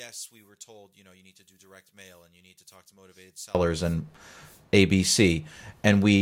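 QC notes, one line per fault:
0.00–3.55 s, one channel inverted: in mono the speech almost disappears, dropping by about 28 dB to a faint trace. This is likely a polarity flip on one stereo channel, so the centred content common to both sides cancels when they are summed.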